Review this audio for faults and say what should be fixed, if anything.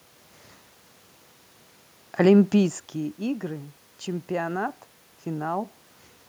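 Nothing in this speech clip needs fixing, since the room noise and the level shifts around 2.5 and 5.5 seconds, where the talker moves relative to the microphone, belong to the recording itself.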